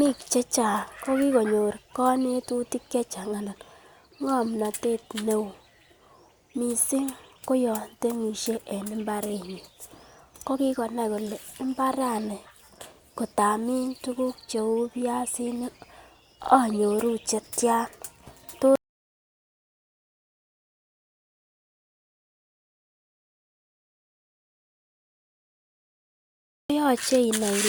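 Repeated frames at 16.43 to 16.52 s: a 40 ms block of the speech plays two extra times. That points to the same compressed frames being written or sent again. It is heard as a brief stutter, and the clip runs 80 ms longer.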